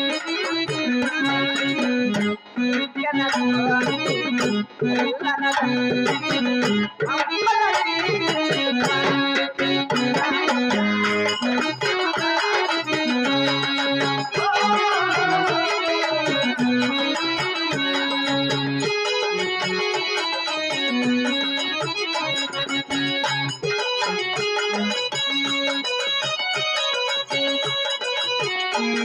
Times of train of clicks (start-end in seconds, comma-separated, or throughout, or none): 11.15-12.20